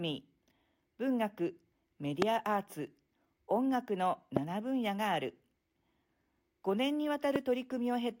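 At 2.22 to 2.24 s, 4.37 to 4.39 s and 7.36 to 7.38 s, a loud pop cuts through the speech, each a single sharp click lasting a little over 20 ms. The first two peak at about 20 dB above the speech, the last slightly lower. The speech continues unbroken beneath each one, which points to an added electrical transient, likely a voltage spike from a switch, connector or static discharge, that the downstream circuitry shaped into a brief pulse.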